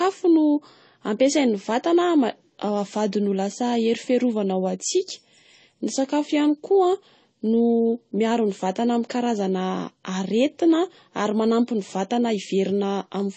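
Throughout, the speech has nothing above 8.3 kHz and carries layered swirling, smeared artefacts, likely from transcoding between lossy codecs, fitting low-bitrate MP3 re-encoded as AAC.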